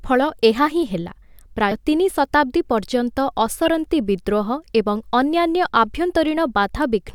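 At 1.71 to 1.73 s, right after "ଫଳ ଏହା ହିଁ ହେଲା", compressed frames are skipped. Around 70 ms of audio just never plays, so the speech jumps ahead.

Then at 3.66 to 3.68 s, just after "ତିନି ଶତାବ୍ଦୀ ପର୍ଯ୍ୟନ୍ତ", a corrupt frame is decoded. One damaged frame plays with energy in the wrong places, giving an error peaking around -10 dBFS.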